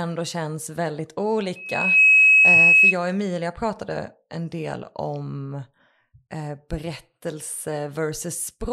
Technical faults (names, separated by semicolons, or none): loudspeaker feedback squeal